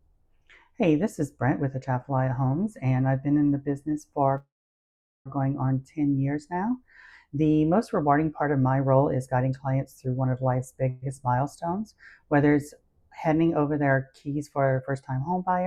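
At 4.37 s a call audio freeze begins: the last sound is stretched into a fading buzz that falls to silence for about 0.79 s. It lasts until 5.28 s and adds roughly 0.88 s of delay, likely from packets held up in transit. On a spectrogram the harmonics smear flat, then go blank. A shorter freeze from 10.90 to 11.04 s fills 0.13 s with a continued buzz and no silence. From 14.66 to 15.57 s a jitter buffer speed-up plays the sound at 111% speed with unchanged pitch. About a tenth of a second is trimmed in small pitch-period cuts.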